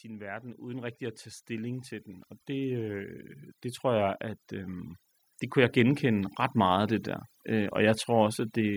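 A speech recording with two faults. Overdone noise removal runs through the whole clip. The suppressor cuts individual frequency bands whenever they sit near its noise estimate. Quiet parts of the voice vanish with the noise. The background drops and breaks up into twinkling specks. Automatic gain rising occurs twice. From 0.05 to 3.11 s, voice and background swell together by about 11 dB, ending just before "det tror jeg at". From 5.53 to 7.8 s, a smaller climb of about 4 dB follows. Both come from the gain control hearing a quiet input and slowly raising its gain.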